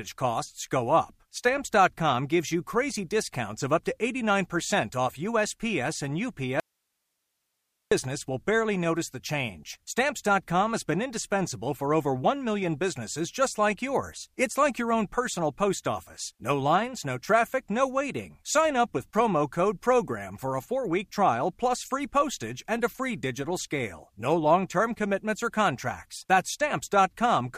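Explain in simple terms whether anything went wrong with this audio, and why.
Something did go wrong: there's an audio dropout to a faint residue from 6.60 to 7.92 s. The speech cuts out abruptly for about 1.3 seconds, and all that's left is a very faint hiss, nothing like a natural pause. Then it snaps back in on "will barely notice the". The likely cause is the sound source briefly dropping out while the rest of the recording chain stayed switched on and kept picking up its own background hiss.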